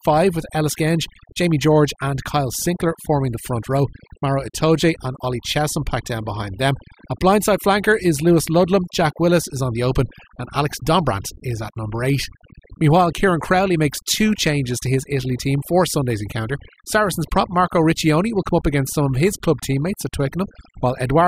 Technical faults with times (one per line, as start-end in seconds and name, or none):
0.00-21.28 overdone noise removal